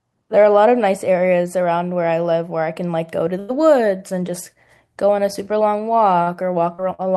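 A burst of packet loss runs from 3.39 to 3.51 s. Several packets went missing together, so the receiver carried the last sound on for about 90 ms while turning it down, and the speech then picks up 40 ms further along. The gap also leaves the delay 50 ms longer.

A short stall from a late packet follows at 6.23 to 6.30 s. The jitter buffer ran dry, and the receiver held the previous sound for 41 ms until the packet arrived. Nothing is lost, but the sound lingers slightly too long.

Two short concealed packet losses come at 6.75 to 6.81 s and 6.94 to 7.01 s. Each time, 40 ms of audio never arrived, and the receiver bridged the hole by extending the preceding sound for 35 and 42 ms. The result is a brief smear before the real speech blends back in.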